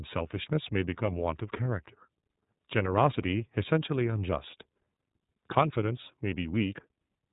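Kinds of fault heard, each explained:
iLBC codec: a narrowband VoIP coding that handles each frame's excitation independently, here with frames that fit 30 ms at about 13.33 kbps. Speech sounds plainly rough and synthetic, and a spectrogram shows an empty band above 3.8 kHz throughout.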